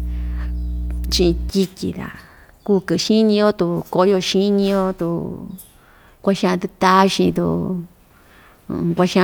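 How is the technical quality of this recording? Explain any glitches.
The recording carries one fault: mains hum from 0.0 to 1.5 s, a steady 60 Hz tone with low harmonics from ground-loop or transformer coupling, loud, sitting just below the speech.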